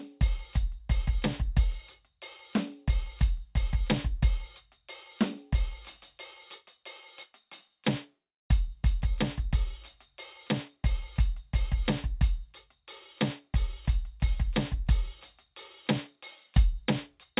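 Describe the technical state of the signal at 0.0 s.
At 0.0 s the music comes through intact, with no dropout, distortion or other technical fault at that point.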